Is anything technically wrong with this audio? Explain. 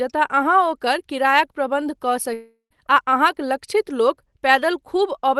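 Yes. From 2.33 to 2.73 s the speech gives way to a buzzy continuation of the last sound that fades out, followed by about 120 ms of near-silence before the audio resumes at "आ अहाँक". About 0.38 s of the actual speech is missing. This is a long network dropout, likely caused by packets that never arrived. The receiver stretched the last sound to fill the gap, then gave up and went quiet.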